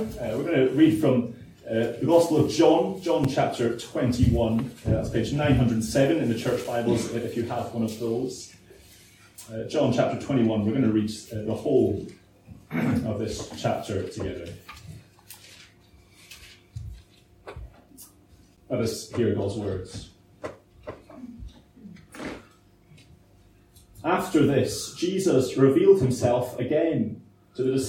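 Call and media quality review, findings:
Block of digital silence at 3.24, 6.64 and 18.56 s: ticks or dips from 5.8, 5.8 and 11.6 ms hard gaps. Fits 256- and 512-sample output buffers underrunning and zero-filled.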